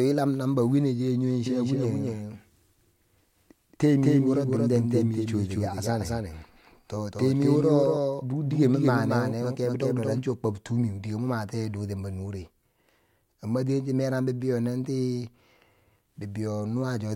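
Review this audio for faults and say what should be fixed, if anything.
Doubled audio track, from 1.46 s to 10.18 s: the speech is joined by a second full-band copy trailing about 200 ms behind and roughly 5 dB quieter, with no decay or room colour, so it sounds like a dry, slapback repeat. It switches on and off abruptly at those two points. The likely cause is the same signal reaching the mix twice, once through a slower path. To prevent it, route each source to the mix only once and mute any monitoring or duplicate capture path.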